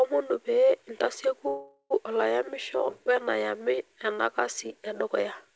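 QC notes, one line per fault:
1.48–1.93 s, call audio freeze: about 0.42 s of fading buzz extends the last sound, then 60 ms of silence. Speech resumes intact at "olayamisho wenayamu ena kasi", 424 ms late, likely because held-up packets starved the jitter buffer. The spectrogram shows smeared, decaying bands; the waveform shows a shrinking envelope, then a flat line.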